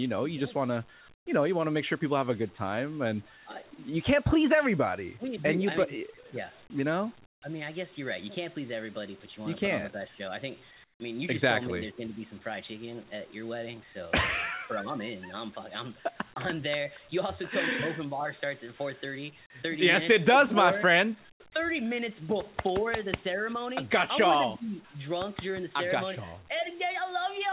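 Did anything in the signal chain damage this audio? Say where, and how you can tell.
Yes, in call processing. At 1.14, 7.26, 10.84 and 21.32 s, the real background vanishes for 80 to 160 ms. Flat, featureless noise fills each gap, about 15 to 22 dB quieter. This is likely comfort noise in place of the background, synthesised while transmission paused.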